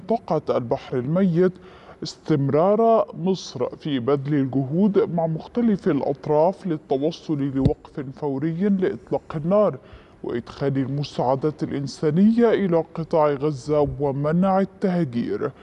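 Throughout, the audio plays slow and low, running at about 0.73 times its proper speed and about 5.5 semitones flat. That fits a wrong sample rate, 44.1 kHz material played at 32 kHz. Unlike a pitch shift or time-stretch, speed and pitch drop together.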